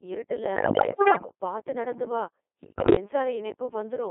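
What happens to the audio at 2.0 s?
Codec 2 vocoder damage is present at 2.0 s, as it is across the whole clip. The decoder rebuilds speech from sine waves using only pitch, voicing and a spectral envelope, consistent with about 2.4 kbit/s, so the voice sounds heavily robotic and buzzy within a 300 Hz to 3.5 kHz band.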